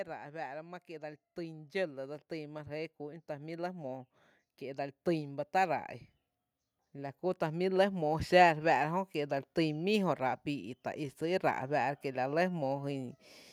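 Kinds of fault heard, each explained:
Automatic gain rising: the gain control judged the input too quiet and turned it up slowly, lifting the speech and background together by about 12 dB from 0.05 to 5.92 s. That slow, steady climb of both separates it from a sudden level jump or a pumping limiter.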